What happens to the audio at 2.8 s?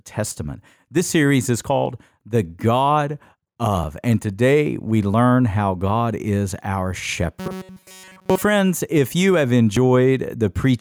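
At 2.8 s you're hearing gain pumping, and it runs through the whole clip, not just that moment. The likely cause is input gain set far too hot with a fast limiter or compressor clamping down on every loud syllable. The level swings by roughly 5 dB, so everything sounds squashed, with loud and quiet parts pulled toward the same level.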